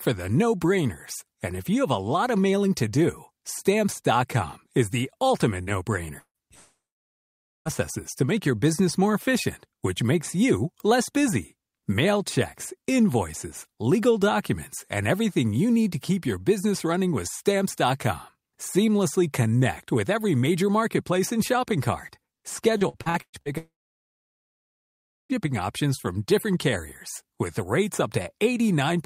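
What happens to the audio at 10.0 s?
At 10.0 s the speech carries on without interruption, with no dropout, click, distortion or other fault at that point.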